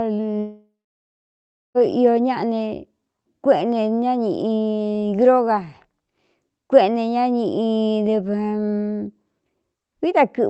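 From 0.39 s to 1.78 s the audio drops out, most likely a long network dropout with roughly 1.4 s of signal never arriving. The receiver stretches the last sound into a buzzy, fading tail before about a second of near silence. Speech then resumes with the lost part missing. On a spectrogram this appears as a smeared, decaying band and then an empty gap. The waveform tapers into a flat line, and throughout the clip the call codec cuts off everything above 8 kHz.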